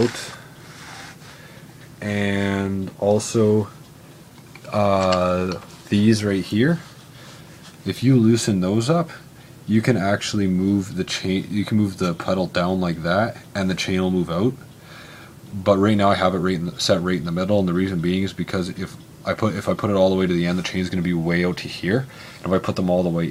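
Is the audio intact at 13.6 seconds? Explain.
Yes, the audio is intact at 13.6 seconds, with no dropout, click, distortion or other fault at that point.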